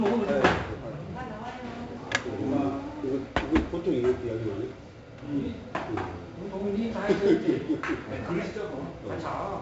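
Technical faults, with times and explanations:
Throughout, 4-bit ADPCM compression: each sample is coded as a small 4-bit step off a prediction, so the error rides along as a gritty hiss that swells with every loud passage, and here it's heavy, with sharp attacks smearing where the step size can't catch up. Nothing reaches above 7.8 kHz, so the top end sounds dull. That ceiling suggests a 16 kHz sample rate, which fits a 64 kbps ADPCM stream.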